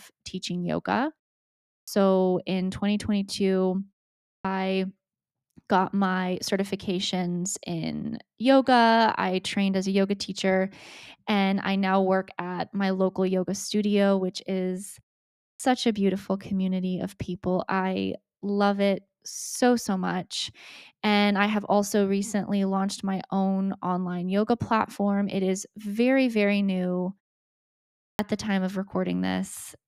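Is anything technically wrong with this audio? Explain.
Yes, there's a clipped start after a pause at 1.76, 4.31, 15.47 and 28.06 s. The output device dozes off during silence, so roughly 115 to 135 ms of each restart gets swallowed. Speech then pops in abruptly, without its first sounds.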